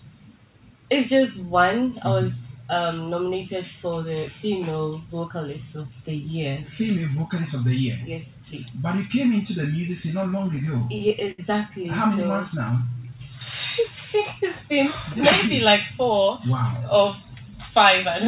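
From 10.22 to 11.40 s, repeated stalls (stutter) occur. The jitter buffer keeps running dry, and the receiver extends the last sound through about a dozen short gaps, the longest 68 ms. Nothing is lost, but the audio drags and hiccups.

From 12.17 to 13.46 s, a jitter buffer slow-down stretches playback to 90% speed at unchanged pitch. Repeated pitch periods add 135 ms, drawing sounds out to rebuild the buffer reserve.

From 15.89 to 17.04 s, a jitter buffer speed-up runs playback at 108% to shed surplus delay. Trimmed pitch periods remove about a tenth of a second, and the audio sounds hurried.

Throughout, the call codec leaves nothing above 4 kHz, which fits G.711 A-law at 64 kbps.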